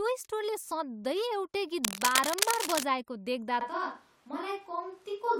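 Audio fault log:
1.84 to 2.84 s, cable scratch noise: dense, uneven scratching sits over the speech at about its level. A worn cable or connector being moved is the likely cause.
3.61 s to end, switch to a distant microphone: speech suddenly turns roomy and hollow, loses bass, and drops about 5 dB. Room noise rises. A likely failed close microphone.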